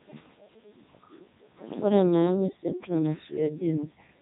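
From start to finish the speech passes through a Codec 2 vocoder. The waveform itself is not kept. The decoder rebuilds the voice from sine waves, using only pitch, voicing, energy and spectral shape. It sounds heavily robotic and buzzy, which fits the top 3.2 kbit/s mode. Nothing remains above 3.8 kHz.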